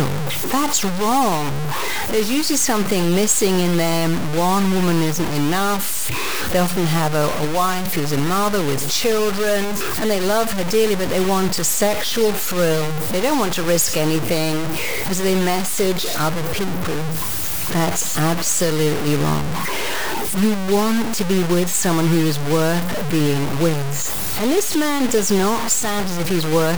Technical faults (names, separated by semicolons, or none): low bit depth without dither